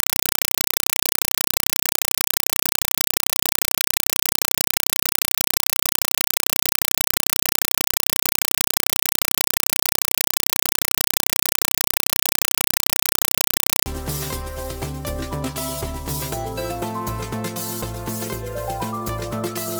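From 0.00 to 13.86 s, very loud chattering static replaces the sound: 4 ms noise bursts repeating 31.25 times a second. This is a compressed stream played as audio, where undecoded frames, consistent with an AC-3 Dolby Digital stream, are treated as samples.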